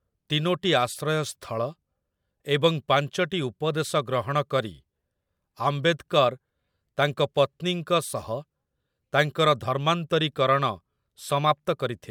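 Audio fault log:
No fault is heard in this speech clip.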